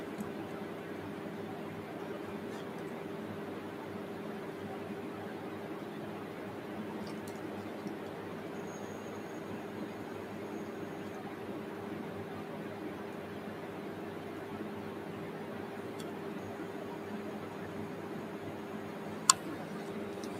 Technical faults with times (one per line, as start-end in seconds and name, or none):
none